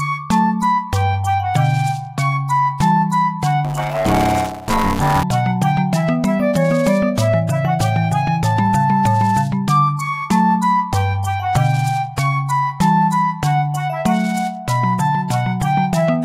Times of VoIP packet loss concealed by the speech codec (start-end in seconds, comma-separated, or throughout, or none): none